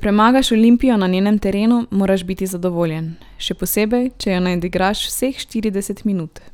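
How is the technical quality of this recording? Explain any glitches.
Listening to the recording, nothing in its technical quality stood out as a problem.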